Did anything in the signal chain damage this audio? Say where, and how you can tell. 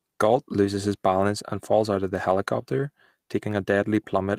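No, nothing along the way seems to have touched this speech, and I can't point to any stage that left a mark on it.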